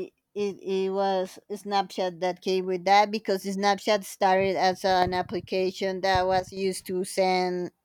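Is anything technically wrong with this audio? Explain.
Yes, there is one fault. From 6.40 to 6.57 s, just after "as an application that", one channel drops out, likely a lost stereo channel before the mono sum, so the speech abruptly dips by about 6 dB.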